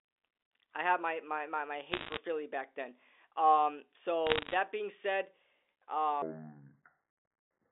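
Speech over a telephone channel carries two bursts of bit errors on a digital phone line, from 1.92 to 2.18 s just after "my my my my" and from 4.27 to 4.54 s just before "being said". Flipped bits in the 8-bit mu-law samples each corrupt a single sample. Hits on the sign or high-order bits throw that sample far from its neighbours, giving sharp ticks that pile into crackle over otherwise intact speech. The density points to an error rate a little under 1 percent. From 6.22 s to the end, a section at the wrong speed plays at 0.57 times normal rate, so pitch drops by about ten semitones and the speech turns deep and drawn out. Speed and pitch shift together, which likely comes from a player or edit running that stretch against the wrong clock. The G.711 line band of 300 Hz to 3.6 kHz is audible throughout.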